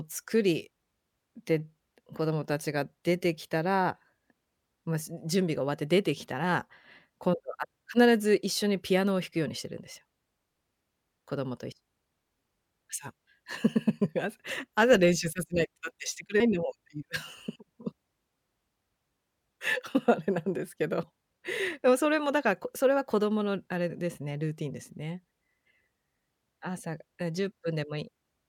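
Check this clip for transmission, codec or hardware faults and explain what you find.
The clip has one fault, compressed frames skipped, which happens twice in the speech. Both jumps occur at 14.51 s and 16.40 s. At each point, whole frames of the coded stream were never played. They were missing or rejected as damaged. The speech leaps forward by about a tenth of a second. That fits about three 32 ms frames.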